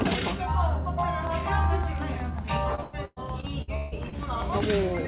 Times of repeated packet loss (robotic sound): 2.75-4.18

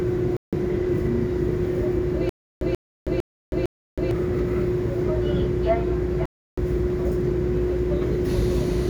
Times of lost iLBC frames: none

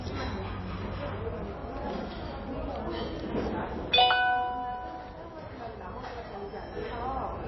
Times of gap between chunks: none

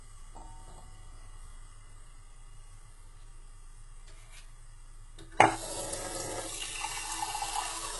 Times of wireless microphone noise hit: none

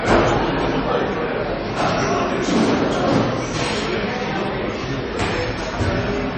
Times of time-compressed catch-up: none

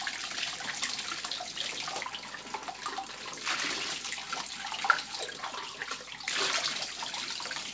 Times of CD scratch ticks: none

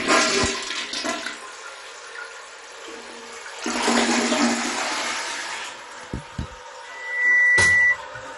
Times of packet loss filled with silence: none

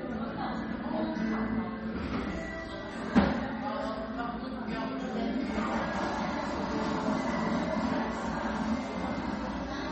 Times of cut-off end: none

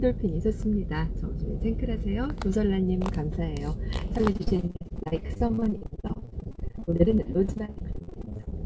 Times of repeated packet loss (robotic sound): 4.18-8.54

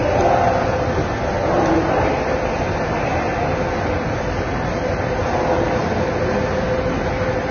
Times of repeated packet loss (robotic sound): none

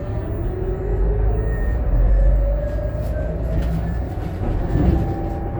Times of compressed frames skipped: 2.07-2.10, 3.57, 4.93

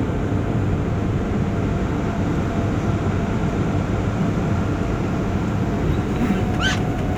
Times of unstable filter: none

